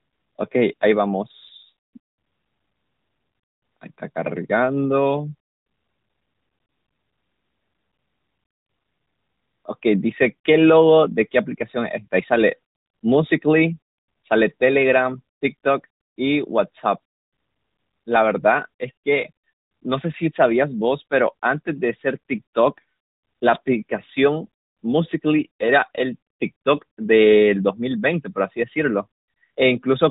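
No technical faults can be heard in this speech.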